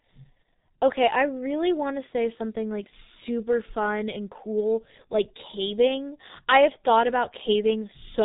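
From start to finish the speech carries the sound of the G.723.1 codec, and the damage is heavy. Nothing survives above 3.8 kHz, so sibilants and plosives smear together, and the voice takes on a hoarse, buzzy roughness because the coder refreshes its model of the vocal tract only every 30 ms frame, which fits a bitrate near 6 kbit/s. A simple low-pass filter would muffle the sound just as much, but it would leave the voice smooth rather than grainy.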